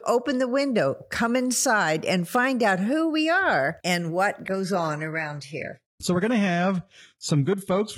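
At 4.45 s, just after "we are and what", the adaptive stream drops to a lower bitrate and stays there. The switch is sudden, with no gap. The treble turns thin, with nothing above 11.8 kHz. Codec artefacts rise, which fits a stream near 16 kbit/s.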